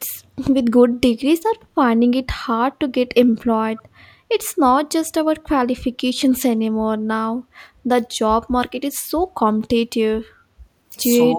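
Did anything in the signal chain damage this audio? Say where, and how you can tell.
Yes, and all three faults come from the call-processing stage: the acoustic echo canceller on a speakerphone leg.

Background gated by the echo canceller appears from 3.27 to 3.38 s. While the far-end loudspeaker was active, the canceller clamped the microphone path, pulling the room noise down by about 13 dB for roughly a tenth of a second before releasing it. A spectrogram shows the broadband noise floor as a short, hard-edged vertical gap. The waveform shows a brief step down in the low-level background and a clean return.

An echo leak is audible from 3.77 to 3.82 s as a faint, delayed repeat of the speech, roughly 25 dB below the main signal and trailing it by 156 ms. The likely cause is the canceller failing to subtract all of the loudspeaker sound its microphone picked up, so a residue was sent back. 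A spectrogram shows a weak ghost of the speech harmonics offset 156 ms to the right. The waveform barely shows it at that level.

Speech suppressed in double talk occurs from 11.21 s to the end of the clip. The speech dips by only a few decibels, around 5 dB, for roughly 100 ms. The likely cause is both ends talking at once, so the canceller could not separate its own talker from the loudspeaker echo and turned everything down. A spectrogram shows the speech energy briefly fading. The waveform envelope shows a shallow sag rather than a gap.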